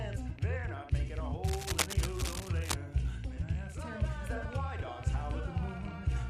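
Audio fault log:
1.44–2.76 s, cable scratch noise: dense, ragged scratching sits just under the sound's own level, likely a worn cable or connector being shifted.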